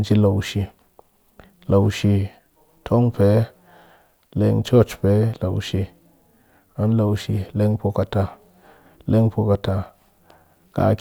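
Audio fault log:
The speech signal shows no audible technical faults at any point in the clip.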